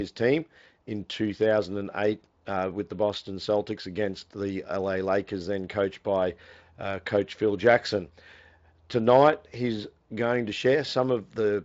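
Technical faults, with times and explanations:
No technical faults detected; the speech runs through a Speex path, with nothing above about 7.6 kHz.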